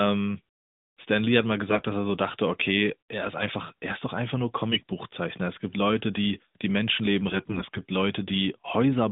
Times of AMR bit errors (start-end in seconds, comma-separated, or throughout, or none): 1.69-1.83, 4.72-4.81, 7.28-7.82